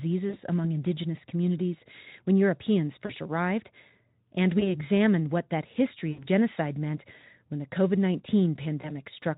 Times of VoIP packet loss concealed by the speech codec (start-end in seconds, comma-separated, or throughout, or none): 0.29-0.37, 3.05-3.12, 4.60-4.76, 6.11-6.27, 8.81-8.93